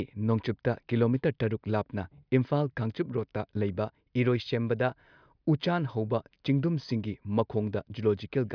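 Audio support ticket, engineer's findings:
No audible faults found on review; nothing to fix.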